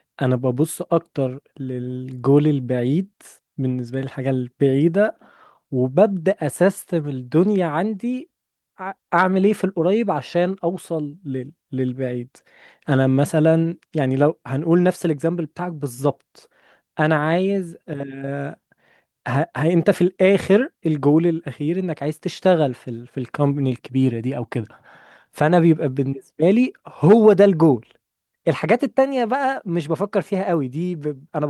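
No technical faults can be heard at any point in the recording. Nothing in the speech points to a problem anywhere along the way.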